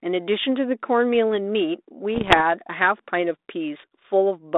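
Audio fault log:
2.15–2.41 s, bit errors on an ADPCM link. Flipped bits hit the speech here for about a quarter of a second, roughly one bit in a hundred. That rate is high enough to damage several stretches in a row. Each wrong bit throws off the decoder's step size and prediction. The error then rings on for some milliseconds before the decoder settles. You hear pops and rough bursts with short jumps in level. Around this, the 32 kbit/s G.726 line carries band-limited telephone sound at about 250 Hz to 3.7 kHz.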